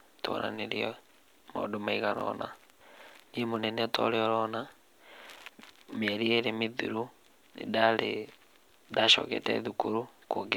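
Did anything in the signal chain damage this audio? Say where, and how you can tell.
Yes: chunks out of order at 2.18 to 2.21 s and 5.90 to 5.92 s, in the driver or buffer stage. Blocks of about 10.7 ms play two and then one block late, giving brief jumbled moments.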